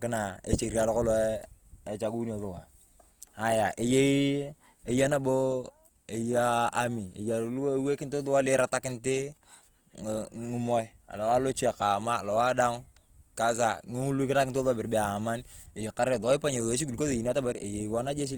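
From start to finish, the speech carries plainly audible Opus compression. It is likely the cause of the damage. The encoder keeps each band's energy but runs short of bits. It fills the gaps by folding lower bands upward or with noise. So there are few spectral holes and little swirl. The speech sounds rough and grainy instead. Content still reaches about 20.2 kHz, which fits fullband music (CELT) mode at a low rate near 24 kbps.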